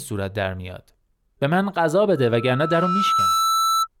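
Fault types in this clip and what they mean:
Loudspeaker feedback squeal: the microphone is picking up its own loudspeaker, and at about 1.3 kHz the loop gain goes above one, so that tone feeds itself. It swells over roughly a second, starting near 2.16 s, until it is about as loud as the speech, and it lasts to 3.88 s.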